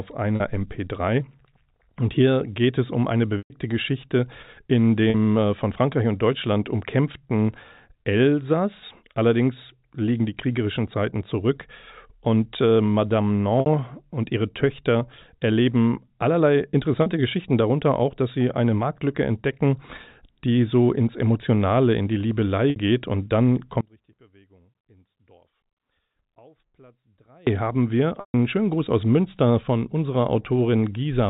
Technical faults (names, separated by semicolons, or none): packet loss with pitch repetition; one channel inverted